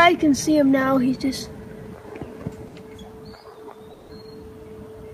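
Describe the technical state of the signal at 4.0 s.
At 4.0 s the sound breaks into a smeared, buzzy continuation of what came just before, fading over about 160 ms from 3.93 to 4.11 s, then resumes with that stretch gone. This is likely a long network dropout, with the receiver synthesising fill for audio that never arrived.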